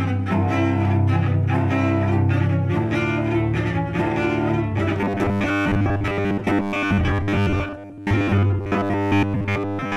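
From 4.99 s to the end, the sound turns rigid and metallic, a steady 100 Hz buzz laid over it that still loosely tracks the underlying audio. This is robotic sound from repeated short buffers, likely caused by new audio arriving too slowly, so the software keeps replaying the last 10 ms to fill the gaps. That 10 ms loop sets the fixed 100 Hz pitch, and because most of the time is filled with repeats, much of the real audio is skipped.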